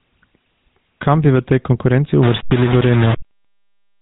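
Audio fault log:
throughout: gain pumping. The level pumps with the speech, moving by about 5 dB. Loud and quiet passages sit closer together than they naturally would, which leaves the speech squashed. The likely cause is an input gain set far too high for the microphone, with a fast compressor or limiter pulling the level down on every loud syllable and letting it recover in between.
throughout: GSM full-rate codec. The speech has the buzzy, gravelly roughness of the original GSM coder, and the damage is plainly audible. Nothing reaches above 3.8 kHz, so the top of the voice is gone. The coder models the vocal tract and drives it with a sparse train of regularly spaced pulses, keeping only a fraction of the excitation. At 13 kbps the fine detail of the voice is lost, and that grainy buzz is what remains.
2.23 to 4.01 s: low bit depth without dither. Right after "bi v tej konkurenci" the sound turns grainy, and the distortion follows the speech itself, sitting roughly 15 dB below it. 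The sound points to something like 4-bit resolution, likely rounded with no dither. With so few steps the error tracks the waveform instead of spreading out as steady hiss. Quiet stretches become gritty or sputter between levels, and the faintest parts drop to silence.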